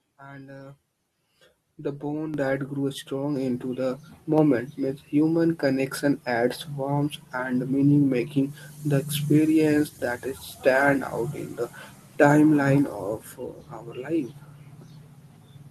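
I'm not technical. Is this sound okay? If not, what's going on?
No. There are two microphone volume steps up, at 2.34 and 3.36 seconds, the second just before "into the". Each time, the calling software decided the microphone was too quiet and turned the input level up all at once rather than gradually. The speech and the background noise suddenly get louder together. The first jump is the bigger one, and the second adds a smaller boost on top.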